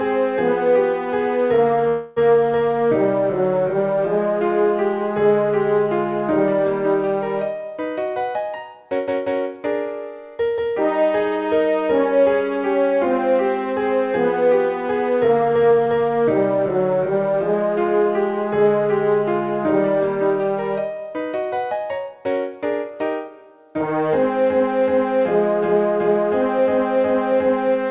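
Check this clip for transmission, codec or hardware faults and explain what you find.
There is one fault, a call audio freeze, from 1.88 to 2.18 s. For about 283 ms the sound stops moving forward. In its place comes a drawn-out continuation of the last moment, a buzz or hiss that fades without reaching silence. The likely cause is packets held up in transit, leaving the jitter buffer empty. When they arrive, playback resumes where it stopped. Nothing is lost, but everything after runs 283 ms later. Throughout, the narrow call band ends at 4 kHz.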